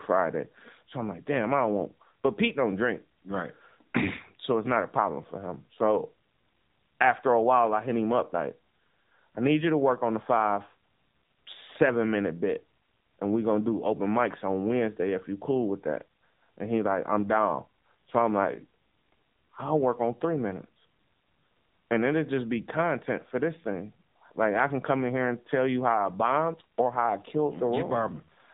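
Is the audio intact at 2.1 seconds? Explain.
No. At 2.1 seconds the speech carries AMR narrowband mobile codec damage, present throughout the clip. Nothing above 3.8 kHz passes. Each 5 ms is rebuilt from a vocal-tract model and 2 to 10 pulses. The result sounds buzzy and synthetic, which fits a low rate near 7.4 kbps.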